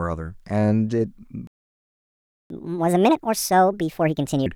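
A speech recording with a playback stall followed by a catch-up at higher speed. At 1.47 s the sound cuts out mid-flow and the output stays silent until 2.50 s, a gap of about 1.03 s. The player has most likely run out of buffered data or had its audio thread blocked, so nothing reached the output until it recovered. When the sound returns at 2.50 s it runs 1.5 times faster than normal until 4.46 s, with the pitch raised by roughly seven semitones. This is the player resampling its backlog to make up the lost second: speed and pitch rise together because the samples are played back at a higher rate rather than time-stretched. Once the delay is recovered at 4.46 s, playback drops back to normal speed and pitch.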